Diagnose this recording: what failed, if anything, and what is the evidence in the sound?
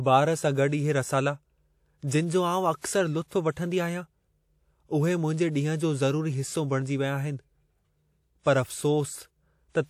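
Brief hiss creeps in just before sharp onsets at 2.08–2.11 s, 3.28–3.31 s and 3.51–3.57 s, lasting 31 to 51 ms and blurring each attack. This is codec pre-echo: noise sized for the loud transient spreads across its transform block into the preceding quiet.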